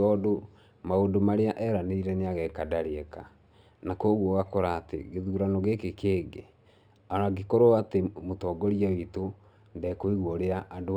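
Speech with imaging from linear upsampling throughout: straight-line interpolation, which fits a 12 kHz original rate, dulls the top band and leaves a faint mirrored image between 6 kHz and 12 kHz that adds metallic shimmer to sibilants.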